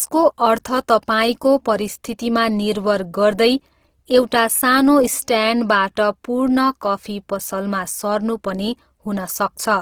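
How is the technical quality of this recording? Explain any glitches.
The technical quality is limited by plainly audible codec damage that runs through the whole speech clip. The artefacts point to Opus compression working in its music (CELT) mode at a low rate, which fits a bitrate of around 16 kbps. With that few bits, the encoder keeps each band's overall energy but fills the detail by copying lower bands or inserting noise. Voiced sounds therefore turn grainy and rough rather than swirly. The bandwidth stays fullband, reaching about 20.2 kHz. On a spectrogram, harmonics look smeared and speckled with noise-like texture instead of clean lines, with few outright holes. The waveform looks ordinary. This is likely the result of a low-rate Opus encode.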